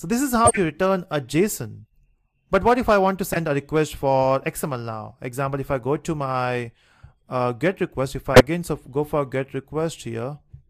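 Corrupt frames were decoded at 0.45–0.58 s, 3.32–3.37 s, 6.76–6.79 s and 8.34–8.41 s. Damaged bits sent energy to the wrong frequencies, giving short chirps and noise bursts peaking around -5 dBFS, except a faint blip at 6.76 s.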